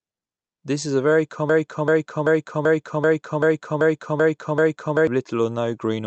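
Right after "is a very", at 1.49 s, the speech locks into a broken-record loop that runs until 5.07 s: a 0.39-second fragment plays nine times back to back, each pass identical. Unlike an echo, the repeats don't fade or overlap, and unlike a brief stutter they continue for several seconds while the speech that should follow never arrives. A stalled player or stream, likely resending its last buffer, fits this. The loop keeps the call path's band limit near 8 kHz.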